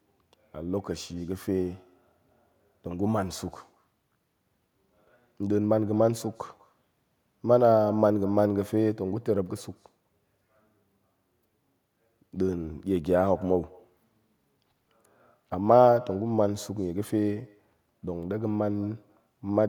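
Throughout the speech, every phrase is shadowed about a fifth of a second later by a faint, thin copy, about 24 dB down: echo with no canceller, the far loudspeaker feeding back unremoved.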